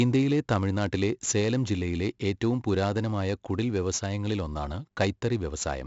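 From start to finish the speech carries 4-bit ADPCM compression. Each sample is coded as a coarse adaptive step from a prediction, so gritty hiss rides every loud syllable and attacks crunch. The spectrogram shows grainy noise tracking level and nothing above 7.7 kHz, pointing to roughly 64 kbps.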